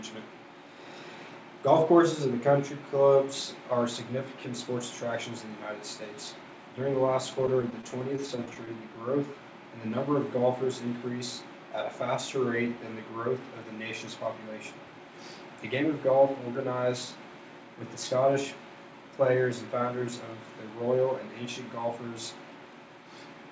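Between 7.42 and 8.69 s the audio stutters from repeated stalls: thirteen brief hitches, none longer than 18 ms, where the jitter buffer ran dry and the receiver stretched the last sound for about a tenth of that stretch. Unlike dropouts, nothing goes missing; the sound just drags. From 19.35 to 19.89 s a jitter buffer speed-up trims about 40 ms of excess buffered audio by cutting out short pitch-period pieces, so the sound runs at 106% speed. The pitch stays the same, which distinguishes this from a resampling or playback-rate error that would raise it. Throughout, the call path band-limits everything to 8 kHz, consistent with G.722 at 64 kbps.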